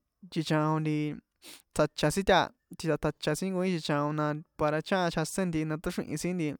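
No technical faults can be heard anywhere in the speech.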